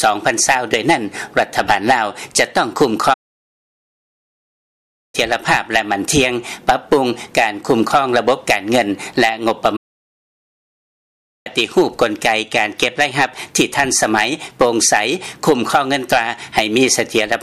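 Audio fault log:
3.13 to 5.15 s and 9.76 to 11.47 s, playback stall: the sound halts mid-flow into flat silence for about 2.0 s, then 1.7 s, before carrying on. The likely cause is the player starving for data or being blocked. These are long, clean silences rather than a brief click-like dropout.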